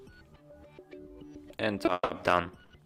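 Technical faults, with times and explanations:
1.85–1.89 s, short stall from a late packet: a packet showed up late, so the last bit of sound gets stretched 20 ms, then picks up where it left off, nothing lost.
1.93–2.11 s, call audio freeze: sound hangs and trails off for about 160 ms, the last 20 ms silent, then resumes intact; likely packets held up in transit draining the jitter buffer.
2.63–2.72 s, short stall from a late packet: same deal again, the receiver holds the last sound for 70 ms waiting on the packet, then carries on with nothing missing.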